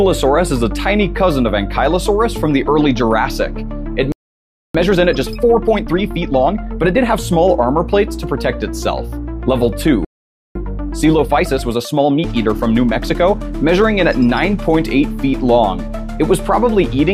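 At 4.12 s the audio cuts to silence in mid-flow and stays silent until 4.75 s, a playback stall of 0.62 s. The likely cause is the player running dry of buffered data or its output thread being blocked. When sound returns it resumes hurried, a time-compressed catch-up from 4.75 to 7.23 s running at 1.25 times normal speed. The player trims its backlog by dropping short segments and cross-fading across the joins, so pitch holds steady but the pace is rushed. A second playback stall follows at 10.05 s, with silence until 10.55 s, about 0.51 s. This gap is likely again a starved buffer or stalled thread. Another time-compressed catch-up runs from 10.55 to 13.55 s at 1.15 times speed. It is milder than the first, with a less obvious rush.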